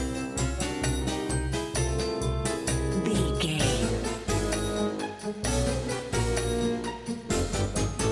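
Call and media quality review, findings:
Nothing stood out on listening; no findings to log against this clip.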